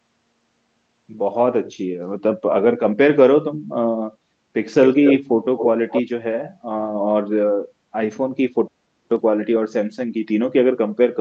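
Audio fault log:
4.82–5.18 s, 5.57–5.67 s, 5.9–6.02 s: echo leak. Speech returns 230 ms late, first near full level, then fainter, likely from loudspeaker pickup the echo canceller missed.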